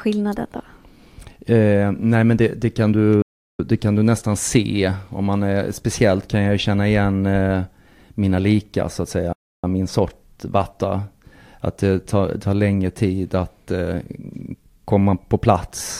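At 3.22 s and again at 9.33 s the speech drops to silence for about 0.37 s and 0.3 s, a playback stall, likely the player starving for data before resuming.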